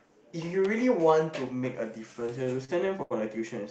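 From 2.13 to 3.13 s the speech shows repeated stalls (stutter). The jitter buffer kept running dry, so the last sound was held and faded in short fills of up to 79 ms. Unlike packet loss, nothing goes missing. The speech drags and stutters rather than skipping.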